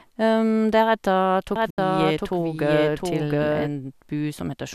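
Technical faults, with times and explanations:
1.56 to 3.68 s, doubled audio track: A second copy of the speech runs underneath the first, trailing by roughly 0.7 s and about 5 dB quieter. It is full-band and dry, with none of the decay or room colour a real echo would carry, and it starts and stops abruptly at those points. The likely cause is the same signal reaching the mix twice, once through a slower path or from an edit that left two copies out of step.
1.70 to 1.78 s, digital broadcast dropout: The sound fades to silence over about 3 ms and stays gone for 72 ms before returning, and the audio in that gap is lost rather than delayed. This happens when a digital receiver stops getting usable frames, either because the signal dropped or because frames failed their error check, and mutes until valid data resumes. A gap this long fits the loss of about three frames.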